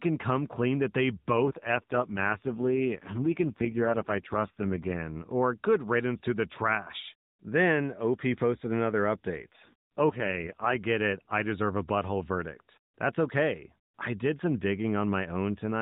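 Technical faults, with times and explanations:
1.34–5.02 s and 9.52–10.76 s, AMR rate drop: the speech turns rougher and buzzier. This fits the narrowband AMR coder falling from around 12.2 to 4.75 kbps on a weak link. The spectrogram keeps its band under 4 kHz with no gap, but harmonics blur and formants coarsen.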